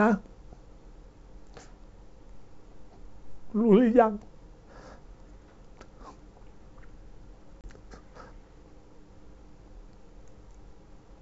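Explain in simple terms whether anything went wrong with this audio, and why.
Around 7.61 seconds the speech drops out for about 30 milliseconds, a hard-edged hole where a few network packets were lost on this ADPCM call. That is packet loss. The wideband telephone coding (G.722) keeps the speech clear up to the high frequencies. What gives this loss away is the moment after the gap. An ordinary dropout would simply resume cleanly. Here the receiving decoder, which predicts each sound from the last, has lost track of the sender, so the speech comes back slightly off in level or with a brief rough edge until it resettles by about 7.67 seconds.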